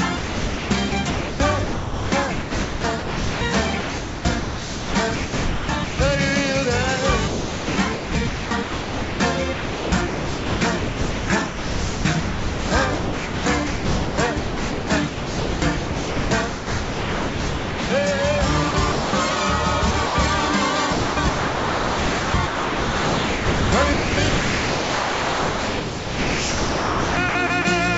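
Sound chopped by the voice detector, from 0.17 to 3.41 s, 3.80 to 5.99 s, 7.28 to 9.20 s, 9.53 to 17.90 s, 18.71 to 19.13 s, 19.91 to 20.15 s and 20.93 to 27.65 s. The sender's gating repeatedly stopped transmission, most likely a voice activity detector, and synthetic comfort noise filled the gaps. The longest replacements run about 6.5 s and 5.8 s. The sound breaks up choppily. Everything sits below 8 kHz, which fits a G.722 call path.

Dropped samples at 11.75 s: a single sample, roughly, is missing, so the waveform jumps straight to a later value. The gap removes no audible content. It is heard as one sharp click, a thin vertical line across the spectrum.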